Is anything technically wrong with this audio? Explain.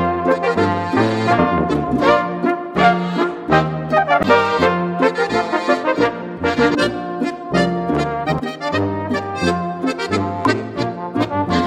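Yes, there is damaged data in a compressed stream. Corrupted frames make the decoder misread the stream and lose sync, giving brief blips at 1.37, 4.23, 6.74 to 6.76, 8.38 and 10.45 s.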